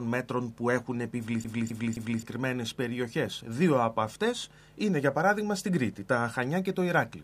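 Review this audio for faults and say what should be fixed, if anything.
From 1.44 to 2.23 s the CD is stuck on one turn: a scratch throws the laser back, replaying the same 0.26 s of sound three times with brief mutes, evenly spaced unlike an irregular dropout. Rip from a clean, undamaged disc using error-correcting extraction software to prevent it.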